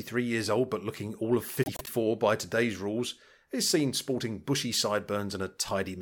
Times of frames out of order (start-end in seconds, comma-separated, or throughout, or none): 1.63-1.89